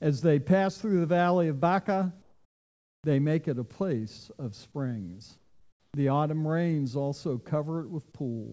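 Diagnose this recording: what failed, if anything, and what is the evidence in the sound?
In the pauses from 2.22 to 3.04 s and 5.38 to 5.94 s, the quiet background, already about 44 dB and 41 dB below the loudest passages, drops by about 7 dB and 9 dB and turns into a flat, textureless hiss before the real ambience returns. The failure is likely in call processing: comfort noise in place of the background. Discontinuous transmission halted the stream while the activity detector heard nothing, and the receiver substituted synthetic noise. The G.722 call path's band limit, with nothing above 8 kHz, is audible throughout.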